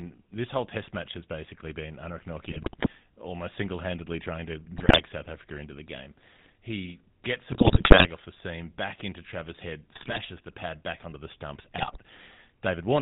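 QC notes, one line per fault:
Throughout: GSM full-rate codec. Plainly buzzy, gravelly voicing from pulse-driven vocal-tract modelling, and nothing above 4 kHz, which points to the 13 kbps full-rate coder.
2.46–2.89 s, 4.78–5.02 s, 7.52–8.09 s (before "off the seam back"), 9.92–10.20 s (before "the pad back onto"), 11.76–11.98 s (after "back onto the stumps"): GSM bit errors. Squawks, pops and gargling as corrupted filter, pitch and gain values warp the spectrum and level.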